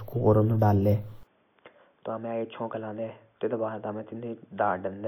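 At 1.23 s the speech turns dull and boxy with no gap, staying so to the end. The likely cause is the input switched to a poorer device. The spectrogram loses everything above 3.5 kHz, and the waveform drops roughly 10 dB over a faint new noise floor.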